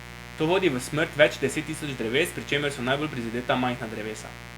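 From start to finish the speech carries a mains buzz: spiky interference locked to the 60 Hz supply, a steady raspy drone roughly 15 dB below the voice. A spectrogram shows evenly spaced horizontal harmonic lines of 60 Hz climbing into several kHz.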